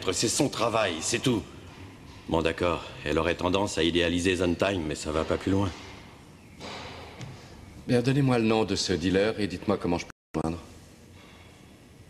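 A loud pop occurs at 3.12 s and again at 8.50 s, each a single sharp transient of about 20 ms, peaking roughly 10 dB and 5 dB above the sound, which continues underneath. The likely cause is a voltage pulse from a switch, plug or static discharge.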